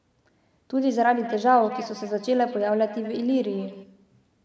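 From 1.19 to 3.86 s, feedback echo between two devices: a second nearby device replays the speech, returning roughly every 200 ms, thinning, at about -15 dB.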